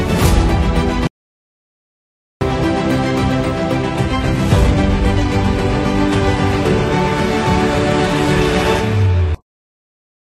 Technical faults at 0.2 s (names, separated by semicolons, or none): none